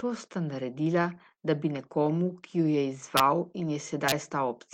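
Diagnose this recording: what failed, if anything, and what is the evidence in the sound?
The failure is in the network: a short concealed packet loss at 1.33 to 1.39 s, just after "sta naredila" and before "da bi nekomu ki". About 40 ms of audio arrived too late or not at all, and the receiver covered roughly 35 ms of it by extending the preceding sound and then crossfading back into the real signal. What you hear is a brief smeared wobble rather than a hard gap. Silence or a sharp click would instead point to an unconcealed dropout or a buffer glitch.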